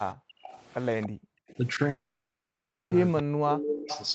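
Background gated by the echo canceller, from 0.15 to 0.44 s: while the far end's loudspeaker was active, the canceller clamped the microphone, so the room sound falls away by about 40 dB for roughly a third of a second before recovering.

Echo leak, from 0.44 to 0.56 s: a faint delayed copy of the speech trails by 293 ms, about 20 dB below the talker. This is likely residual loudspeaker pickup that the far side's canceller failed to remove and sent back. It recurs from 1.01 to 1.09 s at about 15 dB down.

Background gated by the echo canceller again, from 1.09 to 1.47 s: the room tone is pulled down by about 40 dB for a little under half a second, then returns.

Echo leak, from 1.48 to 1.55 s: a very faint scrap of the 293 ms echo, roughly 30 dB below the speech.

Long network dropout, from 1.89 to 2.93 s: packets stopped arriving for about a second. The receiver stretches the last sound into a brief fading buzz. 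After that, about 0.9 s of silence follows, and the audio resumes further on with that stretch likely lost for good.

Speech suppressed in double talk, from 3.23 to 3.9 s: with both sides talking at once, the canceller likely could not tell the local talker from the loudspeaker echo and turned everything down. The voice dips by up to about 40 dB and breaks up in pieces.

Echo leak, from 3.47 to 4.1 s: the 293 ms echo comes through strongly here, only about 5 dB below the speech, as a clearly audible delayed double under the codec's 8 kHz band limit.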